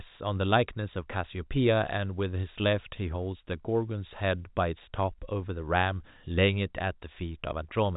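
Speech carried over G.711 telephone coding, band-limited to nothing above 3.8 kHz as that path dictates, with no faults to report.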